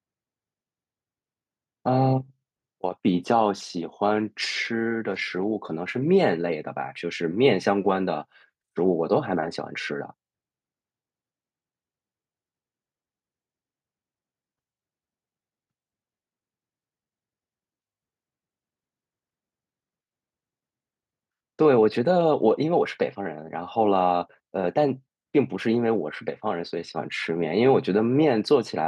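Nothing in this speech recording stands out as a technical fault at any point, so there's nothing to flag here.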